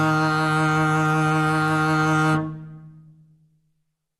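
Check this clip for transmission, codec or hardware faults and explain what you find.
Damage consistent with MP2 compression runs through the whole music clip. Nothing reaches above 12.1 kHz, and the remaining content is dulled and carries a gurgling, granular texture. The likely cause is an MPEG Layer II encode at a low rate, fitting something around 64 kbps. The coder divides the spectrum into 32 sub-bands and, short of bits, switches off the top ones while coarsely quantising the rest. A spectrogram shows a hard ceiling at 12.1 kHz with blocky, flickering patches of energy beneath it.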